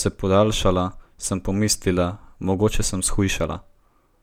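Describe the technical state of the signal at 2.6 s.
At 2.6 s the speech signal is intact, with no fault to be heard at that moment.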